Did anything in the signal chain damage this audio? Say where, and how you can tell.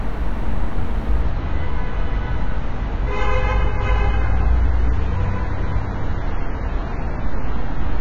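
Yes. At the network and codec stage, an adaptive stream at a lower bitrate: from 1.22 s to the end at 8.00 s the sound abruptly loses everything above 7.1 kHz and turns thinner and more artefact-laden, which fits a switch from a high-bitrate to a low-bitrate AAC stream. The player fetched the cheaper version while keeping time. What sets it apart from a dropout or buffer underrun is that there is no gap or skip, only an instant, sustained step down in quality.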